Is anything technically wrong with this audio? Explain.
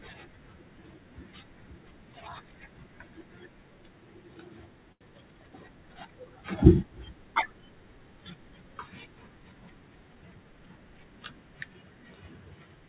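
Yes, there are two faults in this speech, which comes through a call path that cuts off everything above 4 kHz.

From 4.92 s to 5.03 s there is a short stall from a late packet. The jitter buffer ran dry, and the receiver stretched the last sound for about 86 ms until the packet arrived. Nothing is lost, but a sound hangs on with a slight buzz or dip. On a spectrogram it shows as a smeared, repeated band.

From 10.09 s to 10.67 s there is a jitter buffer speed-up. The buffer held too much audio, so pitch-period slices adding up to roughly a tenth of a second were cut out. Playback runs at about 114% with unchanged pitch and sounds hurried. The waveform looks compressed in time.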